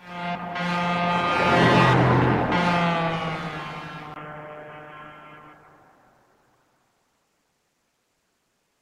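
At 4.14 s, a 20 ms gap. The sound turns dull, with nothing above 3.3 kHz. Likely cause: input switched to a poorer device.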